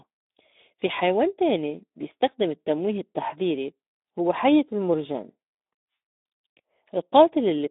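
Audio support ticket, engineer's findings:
Speex codec damage throughout. Speech hoarse, noisy. CELP encoder starving the excitation of bits. The coarseness fits a low setting around 11 kbps. Band limited to 200 Hz–3.7 kHz, with nothing above. Component: VoIP/chat speech encoder.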